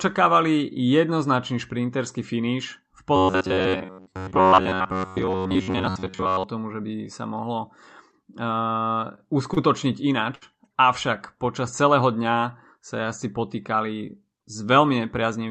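From 3.16 to 6.44 s, just before "tomu že by sa", there's robotic sound from repeated short buffers. It's most likely audio arriving too seldom, so the player loops tiny snippets, around 10.7 ms each. That stamps a rigid metallic buzz near 93.8 Hz over the speech, with most of it repeated rather than fresh.

Then come three short stalls from late packets: at 8.11 s right after "že by sa mohlo", at 9.16 s and at 9.54 s. Each time the jitter buffer ran dry and the last sound was stretched, by 15, 19 and 31 ms, so you hear a sound held a little too long. Nothing is lost.

At 10.35 to 10.44 s a burst of packet loss hits. About 60 ms of audio is gone, and the receiver papered over it with a 64 ms fading continuation before jumping ahead. The Opus call path's 8 kHz bandwidth limit sits under all of this.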